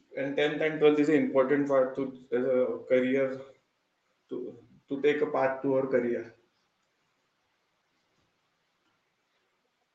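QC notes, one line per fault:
0.08 to 1.23 s, automatic gain rising: the speech and its background swell up together by about 6 dB over roughly a second, as the gain control judges the opening input too quiet and steadily raises its level before settling.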